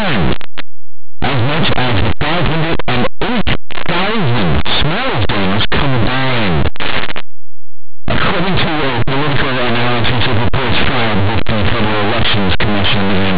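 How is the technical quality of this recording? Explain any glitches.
The technical quality is poor. Linear audio read as companded runs throughout: plain 8-bit samples are decoded as mu-law, so values just one side of zero leap to the largest outputs, causing constant harsh distortion over the speech.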